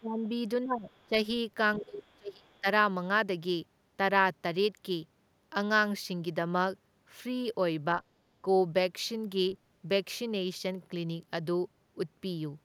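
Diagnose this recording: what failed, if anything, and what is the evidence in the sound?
The echo canceller in the call-processing stage likely mistook overlapping talk for loudspeaker echo and pulled the gain down on both. The result is speech suppressed in double talk. The talker's speech sinks sharply from 0.0 to 0.2 s, from 0.64 to 0.9 s, from 1.07 to 1.13 s and from 1.77 to 2.66 s. The last stretch is the longest and deepest, at around 30 dB down. The shorter ones dip by roughly 15 to 25 dB.

The same call-processing stage also failed to subtract all of the far end's loudspeaker signal from the microphone, likely because the canceller's model of the echo path was incomplete. This lets the other side's voice leak through as faint scraps at 0.91 to 1.04 s, 2.07 to 2.13 s and 2.51 to 2.6 s. Each scrap sits about 40 dB below the talker, brief and low enough to register only as a trace.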